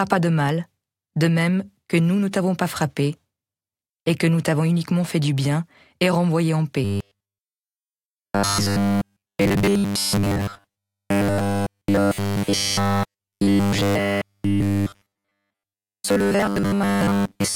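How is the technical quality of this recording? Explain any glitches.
The first part is clean enough, but the back half breaks down badly. From 6.84 s, right after "bien et renvoyé en", until 17.55 s, the speech turns into robotic sound from repeated short buffers. The likely cause is new audio arriving too slowly, with the playback filling the gap by looping a chunk of roughly 10 ms while the real signal gets dropped. Essentially the whole stretch is made of those repeats, so a rigid 100 Hz metallic buzz sits over everything, with the speech only loosely traceable underneath.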